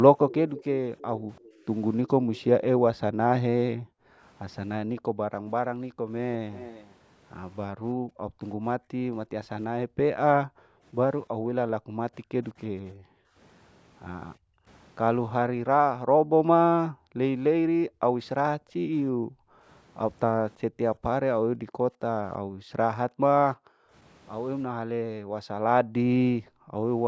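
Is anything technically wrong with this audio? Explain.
Yes, there are two problems, and they come from the same part of the call chain.

First, an echo leak. From 0.29 to 2.41 s, and again briefly from 6.53 to 6.95 s, you can hear a faint delayed copy of the speech trailing the original by about 0.34 s, sitting roughly 15 dB down the first time and nearer 20 dB down the second. That's likely the far end's loudspeaker audio getting into its microphone and slipping past the echo canceller, so it gets sent back as a ghostly repeat.

Second, the background is gated by the echo canceller. Between 1.16 and 6.06 s, adding up to about a second and a half, and then across 7.94 to 26.76 s, totalling around seven seconds, the room tone keeps ducking out, at its deepest by about 40 dB. The canceller is clamping the microphone down hard whenever it thinks the loudspeaker is active, so the ambience keeps pumping in and out instead of sitting steady under the speech.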